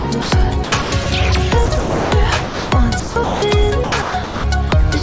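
From 0.00 to 0.32 s, 0.64 to 1.06 s, 1.66 to 2.12 s, 3.00 to 3.42 s and 3.84 to 4.44 s, the sound is chopped, likely by the voice detector switching transmission on and off repeatedly. Parts of the sound are replaced by synthetic comfort noise, leaving holes. At 2.44 to 2.72 s and 4.70 to 4.72 s, the sound is dropped, likely by the voice detector. Each stretch is replaced by one unbroken patch of steady noise rather than a flickering alternation.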